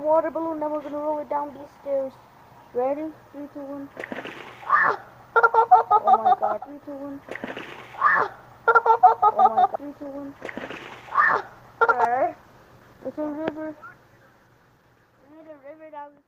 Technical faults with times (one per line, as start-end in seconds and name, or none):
9.91-15.61 call bitrate drop